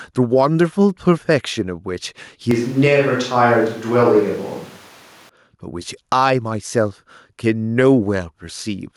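Gain pumping runs through this whole speech recording: the gain ducks by around 5 dB under each loud syllable, likely from excessive gain driving a fast limiter. Switch to a distant microphone from 2.51 to 5.29 s: the speech suddenly turns roomy and thin, with little level change and room noise around 30 dB below it, likely because the close microphone dropped out.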